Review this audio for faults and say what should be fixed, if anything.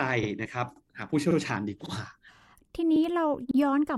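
A regular stutter, heard as a short doubled fragment, occurs at 0.23, 0.76, 1.31, 1.86, 2.41, 2.96 and 3.51 s. The cause is overlapping chunks. The speech was handled in 0.5 s blocks, and each new block began 50 ms before the previous one ended, so that 50 ms plays twice at every join. This pushes the joins about 0.55 s apart. To prevent it, make each chunk start exactly where the last one ended, or crossfade and trim the overlap instead of concatenating it.

A separate glitch at 0.45 s is where the speech jumps forward by about 20 ms. It comes from compressed frames being skipped. One frame, which fits a frame length of about 21 ms, was never played, either because it was missing or because the decoder rejected it as damaged. To prevent it, check the encoded stream for lost or corrupt frames and use error concealment or retransmission.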